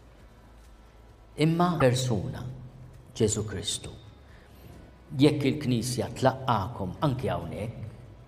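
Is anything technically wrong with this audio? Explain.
Yes. There is one fault. From about 1.77 to 1.82 s, roughly 56 ms, the audio shows damaged data in a compressed stream. Part of the encoded file was wrong at that point. Bytes may have been lost, zeroed, overwritten or mixed with unrelated data. The decoder could not read those frames properly. It lost sync and had to hunt for the next valid frame header. The result is a brief disruption in the sound: a chirp, squawk, click or short hole where the audio breaks.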